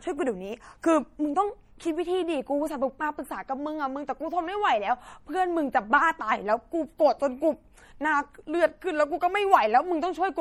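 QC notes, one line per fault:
Throughout: MP3 compression, likely the cause of plainly audible coding damage across the speech. Audio content stops at about 19.9 kHz, so the treble is barely trimmed. The damage instead comes from bit starvation consistent with roughly 48 kbps: the encoder zeroes weak frequency lines, and they flicker on and off between frames, giving the voice a watery, swirling texture. Transients smear as the coarse quantisation spreads energy around each attack.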